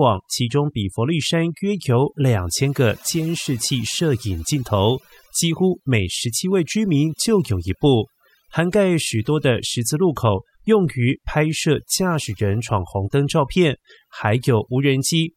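Overdone noise removal runs throughout: bands near the noise estimate are cut away with quieter speech detail, leaving a speckled, lowered background.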